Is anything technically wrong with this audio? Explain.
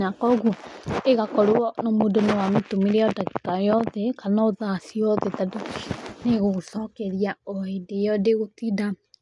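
No, nothing technically wrong can be heard here.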